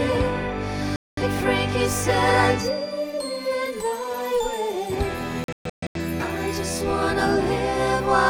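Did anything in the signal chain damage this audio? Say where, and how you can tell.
Yes. A digital broadcast dropout at the receiver: frames were lost or failed checks, so it muted until good ones returned. The sound cuts out from 0.96 to 1.22 s, then breaks into several short holes between 5.44 and 6.0 s, the longest 0.13 s.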